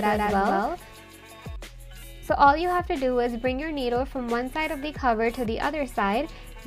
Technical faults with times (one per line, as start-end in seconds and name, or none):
0.00-1.56 doubled audio track